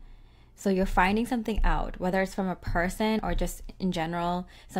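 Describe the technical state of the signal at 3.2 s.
At 3.19 s there is a sudden jump in the sound, with no gap of silence, as roughly 30 ms of audio goes missing and the two sides butt together. This is likely a dropped buffer (overrun), where samples were overwritten before the program read them.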